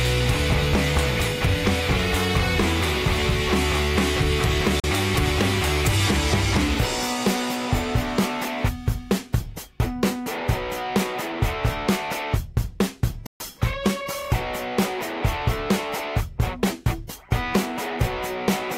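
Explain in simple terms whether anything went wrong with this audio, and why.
A Bluetooth stall, twice: the sound drops to silence from 4.80 to 4.84 s and again, longer, from 13.27 to 13.40 s, then carries on. The likely cause is wireless interference delaying the audio, so the headphones ran out of sound and paused until it arrived.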